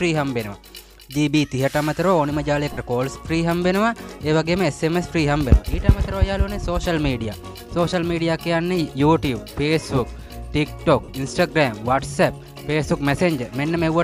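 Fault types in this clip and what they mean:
Lost LE Audio frames: Twice the Bluetooth LE Audio link drops a short run of frames, about 45 ms each, at 2.73 to 2.78 s and again at 11.04 to 11.09 s, which fits six 7.5 ms LC3 frames. The decoder covers each gap by replaying the last good spectrum with randomised signs and fading it after the first few frames, so the sound briefly turns into a noisy smear before picking back up.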